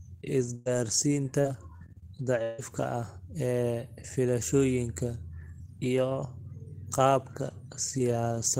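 From 0.55 to 2.60 s, repeated packet loss (robotic sound) chops the speech. Four gaps, longest 156 ms, are patched by repeating earlier sound, before "ah ee filashooyinkan".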